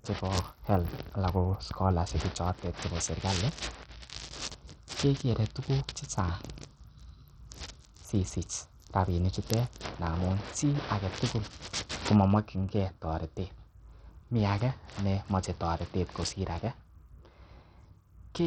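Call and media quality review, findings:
Gritty, coarse texture and flickering treble throughout the speech. Likely Bluetooth SBC compression at a starved bit pool, heavy damage, consistent with about 64 kbps: top sub-bands lose their bits. Spectrogram shows patchy, blinking upper-band blocks, empty above 18.3 kHz.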